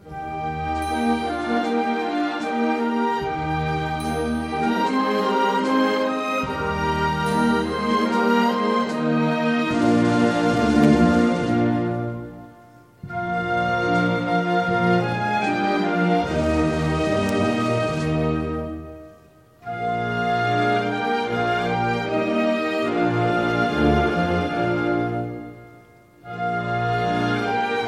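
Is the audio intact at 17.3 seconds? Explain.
No. At 17.29 s a sharp, near-instant snap cuts across the sound, peaking at roughly -10 dBFS. It is an electrical switching spike, likely an arc from a nearby switch, motor or static discharge that the audio line picked up.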